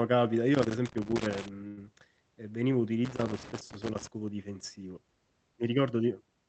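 An irregular scratching crackle runs from 0.55 to 1.48 s and again from 3.05 to 4.07 s. This is loose connector crackle: a worn or dirty contact makes and breaks as it moves, chopping the speech.

At 1.67 s the sound is held and fades away until 1.79 s, then picks up with about 100 ms of speech skipped. This burst of packet loss left the receiver extending the last audio to cover the gap before jumping ahead.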